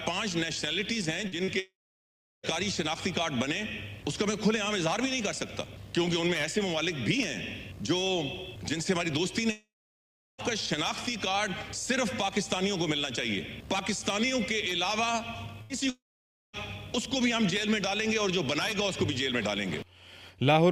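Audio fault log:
1.27–1.35 s and 1.44–1.50 s: short concealed packet loss. Two brief smears, each about 40 ms long. The receiver never got that audio in time, so it stretched the preceding sound to bridge each hole and then blended back into the real signal.
1.59–2.46 s: long network dropout. A short buzz or hiss fades into about 0.72 s of silence. The sound then resumes further on with roughly 0.84 s missing. The likely cause is a network gap that the receiver could only briefly paper over.
9.51–10.41 s: long network dropout. The same pattern repeats: a fading buzz or hiss, then about 0.73 s of silence. The sound returns with about 0.88 s lost, likely as the concealment gave out and nothing arrived to replace the gap.
15.62–15.73 s: burst of packet loss. A held buzz or fading hiss lasts about 75 ms, and then the sound jumps ahead. Several consecutive packets were lost or came too late, so the receiver extended the last sound while turning it down.
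15.90–16.56 s: long network dropout. A brief fading continuation gives way to about 0.54 s of silence. The sound then picks up again with roughly 0.64 s gone, likely because no audio arrived for that stretch.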